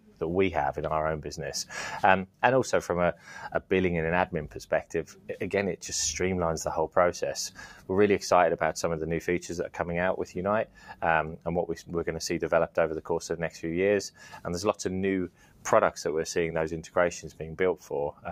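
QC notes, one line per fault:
Throughout: noise suppressor applied to music or sounds. A speech-oriented suppressor stays active across the clip and classes sustained tonal content, ambience and reverberant decay as noise. Its gain rides up and down by around 10 dB, so transients pass largely intact while held material and tails are pulled down between them. The result is audible pumping and fluttering, with the body of the sound thinning whenever nothing sharp is present to hold the gain open.
0.00–0.21 s, 2.26–2.42 s, 5.08–5.29 s, 7.50–7.89 s, 10.65–11.02 s, 14.11–14.47 s, 15.28–15.65 s: sound cut by the noise suppressor. At each point the suppressor misreads the sound as noise and attenuates it harder than the surrounding material, with the deepest drop about 10 to 12 dB. Each dip lasts about 0.15 to 0.4 s, long enough to hear as the level sagging or a decay being clipped short rather than a click. 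Steady and fading parts lose level while attacks mostly survive.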